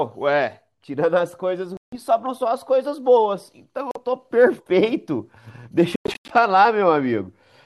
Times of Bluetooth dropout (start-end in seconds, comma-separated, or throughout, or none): 1.77-1.96, 3.91-4.02, 5.96-6.34